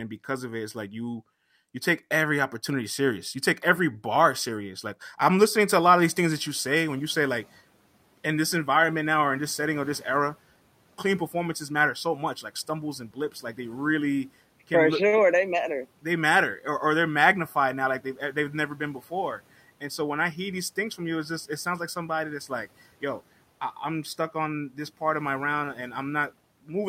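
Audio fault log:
5.77–7.48 s, noise suppressor catching up: noise rising near 6 s leaks through, then sinks by about 8 dB over 1.7 s as the estimate adapts. It happens once, unlike repeated pumping.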